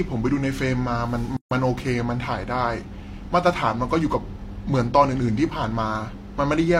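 At 1.37 s a 144 ms gap at a join of encoded pieces opens: untrimmed encoder padding inserts silence, yet speech resumes exactly where it stopped, unlike a dropout that loses material.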